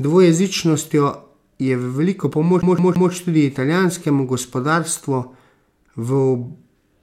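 From 2.62 to 3.11 s the speech stutters, a 166 ms snippet replaying three times with brief mutes: a CD stuck on one turn, the laser jumping back each rotation.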